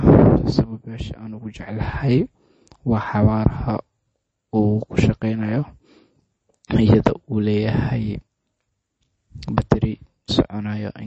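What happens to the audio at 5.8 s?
At 5.8 s you're hearing the same damage that runs through the whole clip: the treble stops dead around 8.3 kHz, and the speech has a plainly audible watery, swirly quality. That's likely MP3 compression at a low rate, something in line with 32 kbps. Starved of bits, the encoder chops off everything above a fixed frequency and drops weak spectral lines, which then flicker on and off from frame to frame. That flicker is what makes the sound swirl.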